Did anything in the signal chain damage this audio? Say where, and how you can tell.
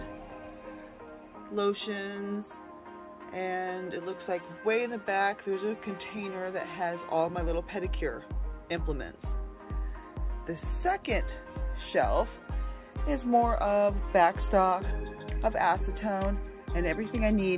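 No, no signal-chain damage detected.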